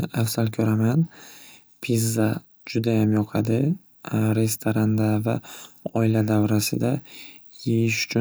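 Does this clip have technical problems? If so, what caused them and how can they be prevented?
No, no technical faults can be heard in this recording, so there is nothing that needs preventing.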